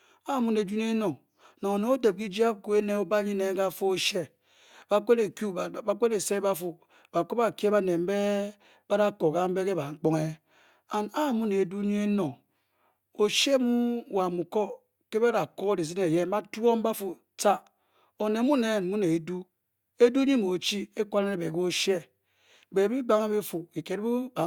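Nothing goes wrong anywhere in this stretch of speech, so there's no technical fault to point to at any moment.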